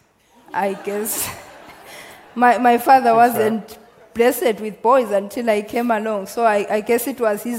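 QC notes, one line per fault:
Nothing stood out on listening, and there is nothing to log for this clip.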